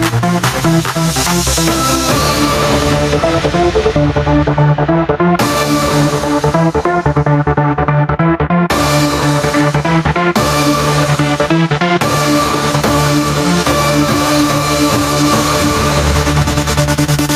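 Throughout the clip, the level ducks by around 10 dB under each loud sound, leaving the audio squashed and breathing. This is gain pumping, likely from gain set far too high, with a fast limiter clamping down on every peak.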